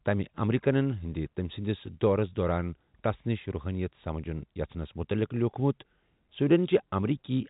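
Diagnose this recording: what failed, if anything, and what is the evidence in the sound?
Nothing here has failed: the speech carries the usual narrow telephone sound of G.711 coding, with nothing above about 3.8 kHz, and that is simply how this path is meant to sound.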